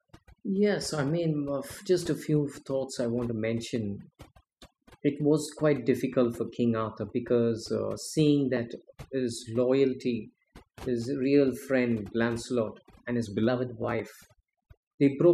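Overdone noise removal runs throughout the speech: aggressive spectral gating cuts bands near the noise floor, leaving near-silent gaps with twinkling specks.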